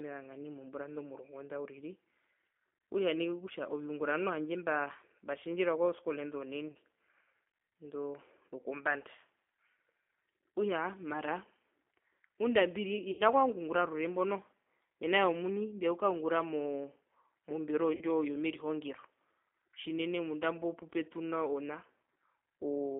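Throughout, the speech has been squeezed through a low-rate G.729 codec, consistent with 8 kbit/s, which rebuilds the voice from a filter, a pitch predictor and a few pulses per frame inside a band of roughly 250 Hz to 3.5 kHz. The result is a narrow, plainly rough and synthetic tone.

At 6.71–6.77 s, 13.11–13.23 s and 17.95–18.04 s, VoIP packet loss concealed by the speech codec removes about 40, 80 and 60 ms of audio, fitting runs of 20 ms packets. The decoder stretches its last pitch and filter into a fading buzzy tone or coloured noise, and the voice stays weakened briefly afterwards.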